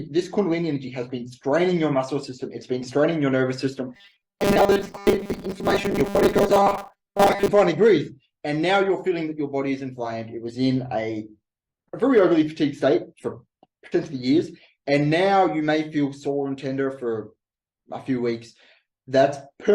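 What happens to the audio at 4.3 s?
Robotic sound from repeated short buffers, 3.95 to 7.48 s: a rigid 200 Hz buzz, likely from a 5 ms chunk looping over most audio, showing as evenly spaced harmonic stripes.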